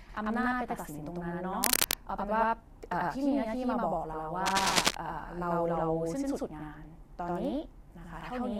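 From start to finish, one channel of the recording path runs late by about 93 ms, which fits a 4096-sample buffer, and the two channels are summed to mono. This channel delay produces doubling: every syllable of the speech is followed by a second copy at the same level, a single slap echo close behind the first. Consonants sound twice throughout.

From 1.63 to 1.87 s, and again from 4.46 to 4.86 s, the sound points to a worn cable or connector that is likely being moved while carrying a DC voltage. Its contact resistance jumps rapidly, and this cable scratch noise adds dense, uneven bursts about 5 dB louder than the speech. Both passages are heard as rough scratching and rustling over the speech, the second lasting longer than the first.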